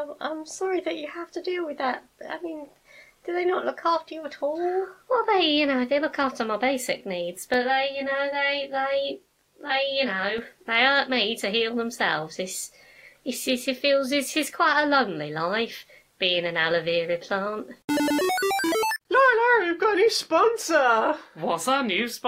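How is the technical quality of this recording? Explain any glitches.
The recording has one glitch, a stretch of channel delay (comb filtering) between 7.54 and 10.38 s. During that span one channel runs late by around 20 ms, and the two channels are folded together into mono. Anything common to both sides cancels at a regular series of frequencies, starting near 30 Hz and repeating up the spectrum. The sound turns rough and slightly doubled for those 2.8 seconds.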